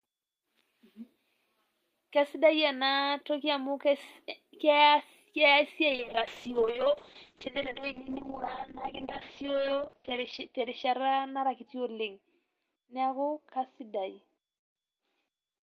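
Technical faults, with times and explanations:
5.91 s to the end, call bitrate drop. The encoder's bit budget collapsed, which fits a fall from about 40 kbps to 6 kbps. Coarser coding makes the speech rough and watery. The top end narrows from about 20 kHz to 6 kHz, sounding muffled. The worst stretch lasts about 3.8 s.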